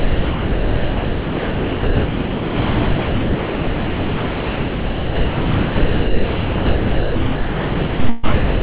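From 0.00 to 3.15 s the sound is replaced by steady comfort noise. It returns briefly, then drops out again from 3.23 to 7.15 s, from 7.35 to 7.99 s, and from 8.33 to 8.62 s. Each gap lasts about as long as the noise fill, up to about 3.9 s. The likely cause is sound dropped by the voice detector. The sender judged the sound to be background and stopped transmitting. The receiver filled the silence with synthetic noise.

Between 8.09 and 8.25 s there is a burst of packet loss. About 140 ms of audio is missing. The receiver stretches the last sound across the gap and lets it fade rather than going silent. When playback resumes, it has skipped ahead. The stretch sounds like a brief smeared tail. No dead air follows it. Throughout, nothing is heard above 4 kHz, which fits a narrowband call codec such as G.711 A-law.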